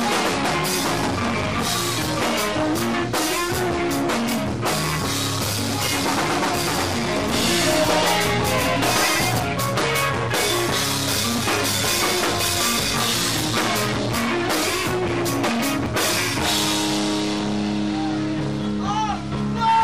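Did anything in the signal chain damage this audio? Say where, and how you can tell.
Yes. From 7.34 to 9.4 s there is a doubled audio track: a full-band copy trails about 150 ms behind at roughly equal level, with no decay or room colour, switching on and off abruptly. On a spectrogram every feature repeats at that fixed offset. The likely cause is a second, slower capture path or a misaligned edit.

At 15.86 s a dropped buffer (overrun) in the driver or buffer stage produces a sudden jump in the sound and no silence. The waveform shows a hard discontinuity, and the spectrogram shows a thin vertical broadband line. About 40 ms of audio is missing, likely because samples were overwritten before the program read them.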